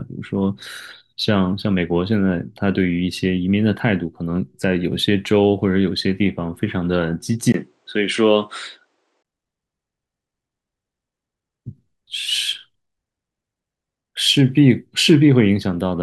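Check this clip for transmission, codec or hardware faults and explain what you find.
One fault is audible: from 7.52 to 9.25 s the sound turns duller, consistent with the input switched to a poorer device, likely a different microphone. The band stops near 9.3 kHz, a 20 ms gap marks the switch, and the level stays roughly the same.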